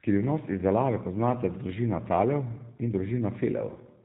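From start to finish the speech carries G.729 codec damage: nothing above 4 kHz, and a rough, synthetic edge that fits a low 8 kbit/s VoIP encoding.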